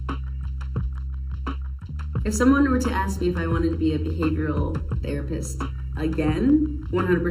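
Channel delay (comb filtering) runs throughout: one channel lags by roughly 0.7 ms, and the mono sum notches near 700 Hz and its odd multiples, leaving the sound hollow.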